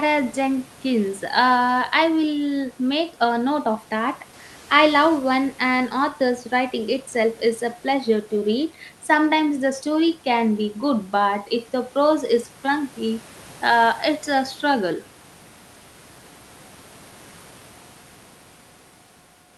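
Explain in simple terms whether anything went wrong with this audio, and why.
Nothing went wrong here: the speech comes through the call connection just as it should, with only the quiet background sound of the room sitting well beneath it.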